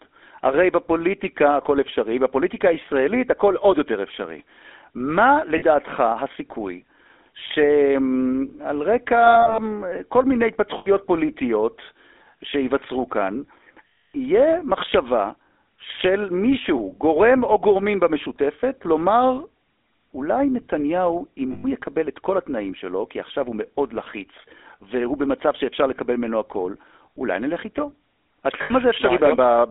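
GSM full-rate codec, throughout: the speech is squeezed into a 250 Hz to 3.6 kHz band, and pulse-driven vocal-tract modelling leaves a plainly audible buzzy, gravelly roughness.

Lost GSM frames occur at 5.58 s, 9.26 to 9.59 s (scattered short gaps), 10.78 s, 13.88 to 14.16 s, 21.52 s and 28.62 s. In each, the last good frame is repeated, so the sound hangs as a rough metallic ring. The longest loss is 260 ms at 13.88 s.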